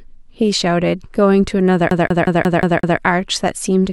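From 1.90 s to 2.98 s the speech is caught in a CD stuck on one turn. The same 180 ms slice repeats six times, with a brief mute at each jump.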